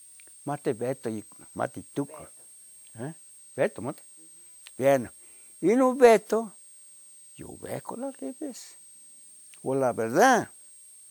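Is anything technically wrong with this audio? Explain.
Yes. A switching supply whistle runs through the whole speech clip. A switching power supply in the chain is cycling at a rate that falls inside the audible range, either because it has dropped into a burst mode or because it is beating against another converter. Its ripple leaks into the audio path as a thin, high whistle wandering between about 8.35 and 8.67 kHz. It sits well below the speech.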